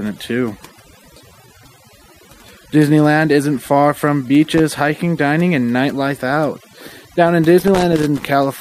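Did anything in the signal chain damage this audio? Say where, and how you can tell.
Yes. Overdone noise removal runs through the whole speech clip. That places damage at the processing stage, where a noise reducer was set far too strong. The background has dropped and broken up into small twinkling specks. The tool mutes any frequency band that comes close to its noise estimate, so the quieter parts of the speech are cut away along with the noise.

Loose connector crackle points to the analogue wiring. There are two bursts. The first runs from 4.44 to 4.59 s, between "isn't far from" and "hiking dining and nightlife". The second is longer, from 7.60 to 8.27 s. Both are irregular scratchy crackle, not clean clicks. A worn or dirty contact is making and breaking as it moves. That chops the signal into fragments, and any DC on the line adds pops.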